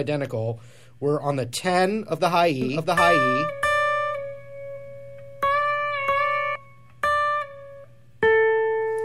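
From about 2.62 s to 6.56 s there's a doubled audio track: a second full-band copy of the sound runs roughly seven tenths of a second behind the original, at about the same level. It's a clean duplicate with no decay or room colour, so it doesn't read as an echo, and it cuts in and drops out abruptly. The likely cause is the signal being picked up again through a slower path, or an edit leaving two copies out of step.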